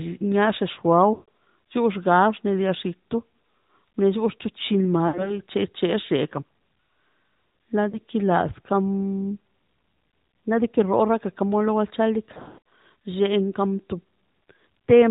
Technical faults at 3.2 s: AMR narrowband mobile codec

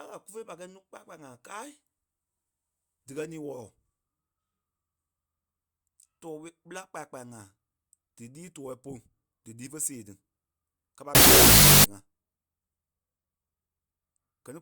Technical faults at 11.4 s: wrong sample width

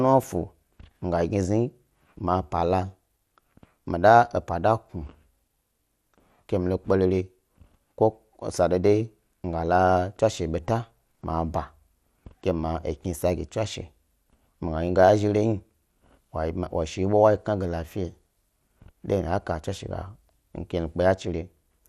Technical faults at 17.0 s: MP2 compression

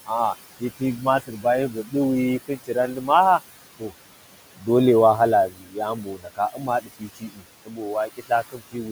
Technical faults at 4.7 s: noise suppressor artifacts; speech cut by the noise suppressor

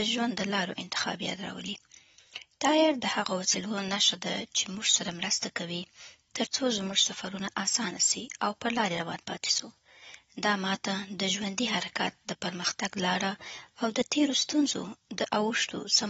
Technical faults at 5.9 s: AAC compression

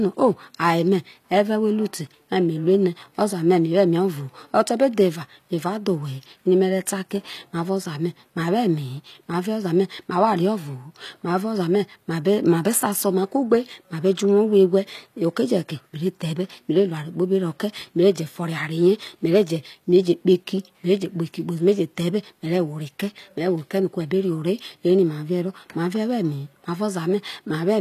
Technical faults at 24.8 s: HE-AAC compression

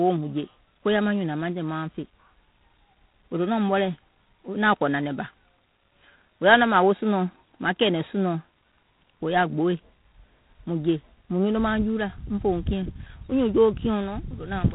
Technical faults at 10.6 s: G.726 ADPCM

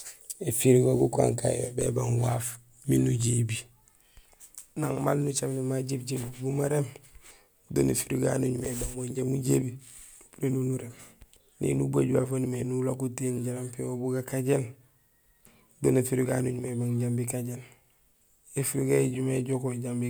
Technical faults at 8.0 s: none

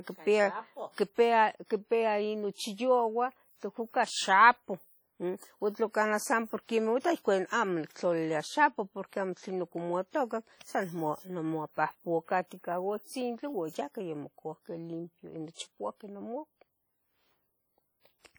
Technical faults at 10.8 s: WMA compression

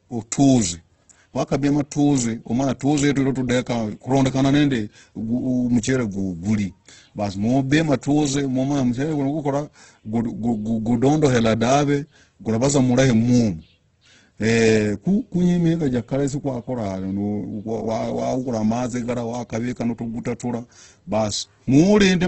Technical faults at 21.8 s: Opus compression

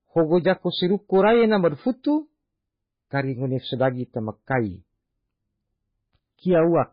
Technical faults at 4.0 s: MP3 compression

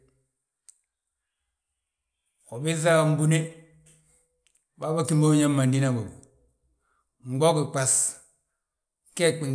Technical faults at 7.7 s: none

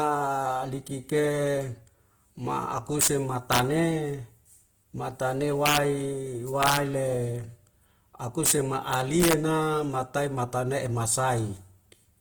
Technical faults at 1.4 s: Opus compression

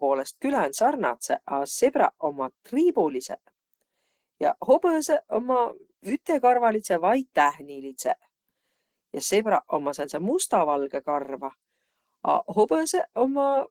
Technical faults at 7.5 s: Opus compression

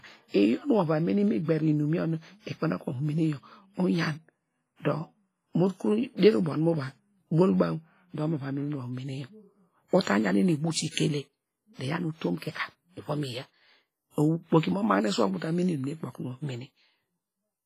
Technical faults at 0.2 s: WMA compression

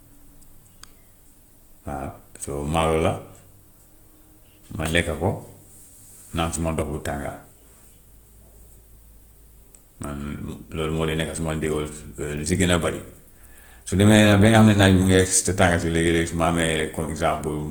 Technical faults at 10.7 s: Opus compression

